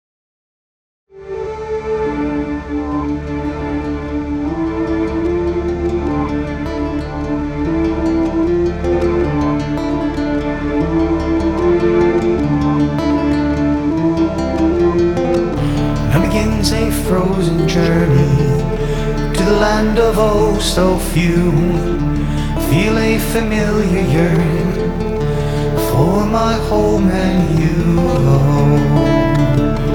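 The signal carries no technical faults, apart from a smooth fade-in that begins at about one second and reaches full level at 1.56 s with no click or hard edge.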